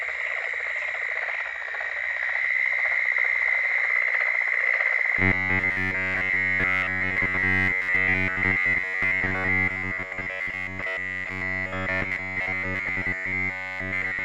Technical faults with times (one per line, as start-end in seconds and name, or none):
5.19-14.24 robotic sound from repeated short buffers